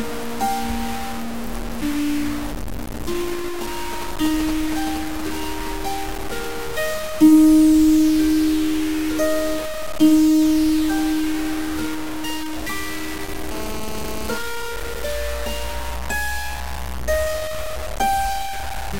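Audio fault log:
throughout: low bit depth without dither. Grainy distortion that tracks the sound, with error roughly 10 dB below the sound, likely from truncation to about 5 bits.
3.93–5.68 s: GSM signalling bursts. A galloping dit-dit-dit of short 217 Hz buzzes, roughly 10 dB below the sound, from a nearby phone signalling in brief groups rather than transmitting continuously.
13.51–14.38 s: GSM phone buzz. A continuous, raspy 217 Hz buzz about 11 dB below the sound, unrelated to it, from a nearby phone in a call transmitting bursts 217 times a second.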